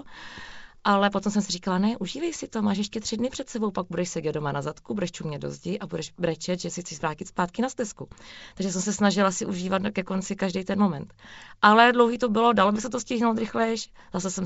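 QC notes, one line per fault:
No faults heard; wideband telephone coding sounds as expected.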